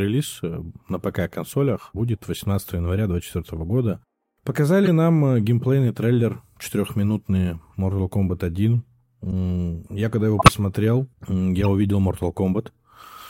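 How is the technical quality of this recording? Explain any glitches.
The speech is marred by four corrupt frame decoded glitches, at 4.85–4.88, 9.31–9.33, 10.39–10.53 and 11.61–11.68 s. Each time, damaged compressed data was decoded anyway, scattering energy into the wrong frequencies across a few frames. The results are brief chirps and noise bursts, the loudest at 10.4 s. On a spectrogram they show as short smears of misplaced energy, and in the waveform as sudden spikes.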